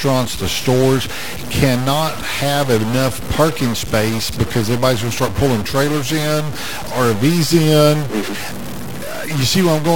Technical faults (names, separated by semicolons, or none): stuck bit